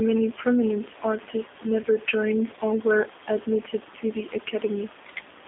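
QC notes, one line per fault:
Throughout: G.729 codec. The line band runs from about 250 Hz to 3.6 kHz, and the speech has a rough, slightly synthetic edge. Unlike simple band-limiting, that grain comes from rebuilding speech at 8 kbit/s out of a vocal tract filter and sparse pulses.
1.83 to 1.87 s: VoIP packet loss concealed by the speech codec, between "prominent artists" and "joined or were admitted". About 10 ms of audio was lost, which fits a single missing frame. There is no silent gap or click as in a plain dropout. The decoder instead stretches its last pitch and filter into a brief fading smear. The voice then stays weak or distorted for tens of milliseconds or more while the frames that build on one another recover.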